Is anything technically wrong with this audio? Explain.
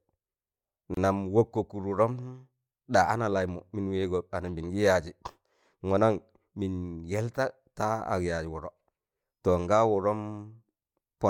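Yes. There is a gap at a join of encoded pieces from 0.94 to 0.97 s. Separately encoded segments were spliced without trimming the encoder delay and end padding, leaving a 28 ms silence with smeared edges before the speech resumes where it broke off.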